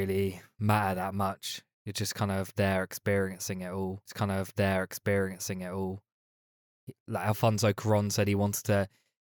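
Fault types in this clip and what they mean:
Stream segment repeated: The player queued or fetched the same stretch of the stream twice, so a block of the programme plays a second time. In this speech clip it happens just after "there experiencing it all", from about 4.05 to 6.05 s. Two seconds of speech that were already heard come round again. A small blip marks the jump back to the start of the repeated section. The repeat adds 2 seconds to the running time.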